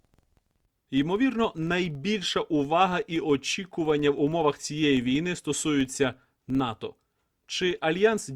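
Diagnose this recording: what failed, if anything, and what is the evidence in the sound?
The failure is a filter restarted on every block, in the driver or buffer stage. It lasts the whole speech clip. A low buzz near 21.5 Hz rises and falls with the speech level. Each block starts from empty filter state and leaves a small transient. That rate fits 2048-sample blocks.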